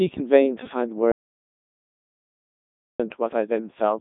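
It's a short speech clip that's been through the Codec 2 vocoder the whole way, and it sounds like the 3.2 kbit/s mode: heavily robotic and buzzy, because the voice is rebuilt from sine waves out of pitch, voicing and envelope data, squeezed into roughly 150 Hz to 3.7 kHz with nothing above 3.8 kHz. Then from 1.12 to 3.00 s there's an audio dropout to silence, nearly 1.9 s of dead silence with no room tone, most likely the input dropping out while recording carried on.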